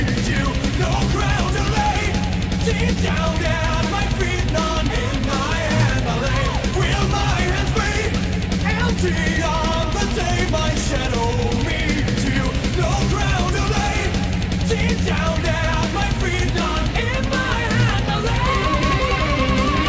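No technical faults can be heard anywhere in the clip. It carries the sound of a working call path, with nothing above 8 kHz, which fits a wideband codec such as G.722.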